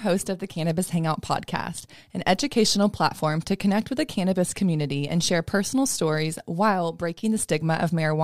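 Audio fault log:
No fault is heard in this speech clip.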